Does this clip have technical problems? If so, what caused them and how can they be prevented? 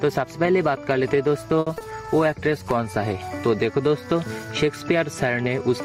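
Yes. Gain pumping runs throughout: the background swells by about 10 dB in gaps and ducks under loud sounds, likely from excessive gain and a fast limiter. The waveform envelope looks flattened and breathing. Lower the input gain and use a slower limiter.

A short stall from a late packet at 1.59–1.68 s holds the last sound for 70 ms. It appears as a smeared, repeated stretch on the spectrogram. A deeper jitter buffer prevents this.

Short concealed packet loss at 1.74–1.78 s and 1.78–1.82 s replaces two 20 ms gaps with extrapolated sound, leaving brief smeared patches with blurred onsets. Redundancy or forward error correction reduces this.

A call bitrate drop from 128 to 23 kbps spans 2.05–3.69 s, with about 1.56 s at the lowest rate. The sound turns rough and muffled, and the spectrogram's upper bands disappear. A steadier network path or a higher minimum bitrate prevents this.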